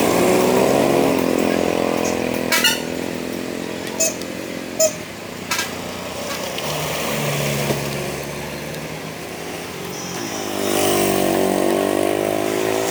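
From start to finish, the audio is read two samples at a time, so it plays at double speed. The reader treats each pair of samples as a single frame, as if the stream had two channels or samples twice as wide. Every event goes by in half its proper time. Pitch rises by 12 semitones, a full octave.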